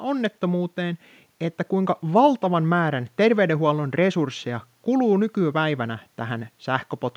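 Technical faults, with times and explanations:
No technical faults are audible.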